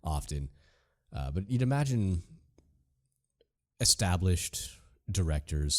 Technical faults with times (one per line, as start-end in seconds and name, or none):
none